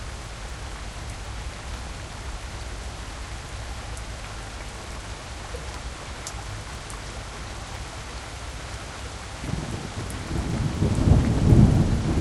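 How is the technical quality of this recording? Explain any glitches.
The recording is marred by one fault that runs through the whole clip.

Resampler restarted on every block, throughout: each 250 ms block was rate-converted in isolation, likely from 24 kHz up to 48 kHz, so every block edge carries a small error. The result is a steady tick four times per second, audible only while sound is present.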